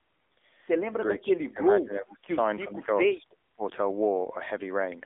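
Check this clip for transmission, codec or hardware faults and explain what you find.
Two faults are present: narrowband mobile coding across the whole clip, and three dips that are likely speech suppressed in double talk.

The AMR narrowband mobile codec runs throughout. Content is confined to roughly 250 Hz to 3.6 kHz, with nothing above 3.7 kHz, so a spectrogram shows a hard ceiling. Pulse-driven vocal-tract modelling makes the voice plainly buzzy and synthetic, which fits a low mode near 7.4 kbps.

Three level drops occur, at 1.21 to 1.6 s, 2.66 to 2.9 s and 3.16 to 3.63 s. The first and third fall steeply, by about 25 dB. The middle one is a shallower dip of about 10 dB. These are likely an echo canceller muting the talker while the far side spoke. The waveform shows the envelope collapsing into notches.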